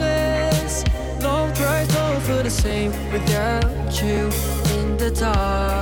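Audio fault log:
2.71 s and 4.17 s, dropped buffer (overrun): each is a short jump where the sound skips forward with no gap of silence, losing only a sliver of a couple of milliseconds or less. The likely cause is a capture buffer not read before the hardware overwrote it, so that stretch of samples vanished and the audio on either side was spliced directly together. The abrupt join in the waveform is heard as a jump in the sound.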